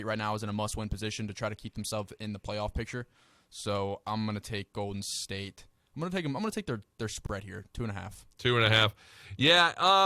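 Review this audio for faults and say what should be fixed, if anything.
At 7.26 to 7.29 s, between "gonna take their their" and "here two and a", the speech drops out for about 29 ms: a gap at a join of encoded pieces. The two segments were encoded separately and butted together, so the encoder's start-up delay and last-frame padding remain as a brief silence with edges smeared by the codec. To prevent it, encode the programme in one pass, or trim each segment's encoder delay and padding (or use gapless metadata) before joining.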